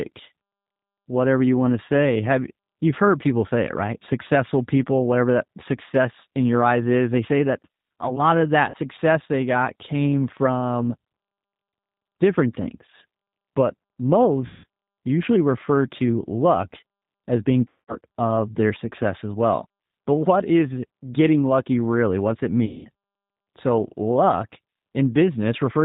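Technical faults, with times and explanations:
Throughout: G.729 codec. The speech has been squeezed through a G.729A link at 8 kbit/s, which rebuilds each 10 ms frame from a vocal tract filter, a pitch predictor and a handful of pulses rather than sending the waveform itself. Nothing above 4 kHz survives, so the sound is dull and band-limited, and the coarse pulse model leaves a plainly audible roughness and slightly synthetic edge on the voice.
8.70 to 8.78 s, 14.46 to 14.65 s, 17.68 to 17.98 s and 22.65 to 22.89 s: VoIP packet loss concealed by the speech codec. Packets went missing, about 40 ms worth after "that a lot of", then roughly 180 to 200 ms in each later gap (before "usually refer to luck", after "to luck as being", and at 22.65 s). The decoder fills each hole by repeating its last pitch and filter at falling gain, so the sound smears into a fading buzzy tone or coloured noise, and because each frame builds on the one before, the speech stays weak or distorted for a moment after real packets resume.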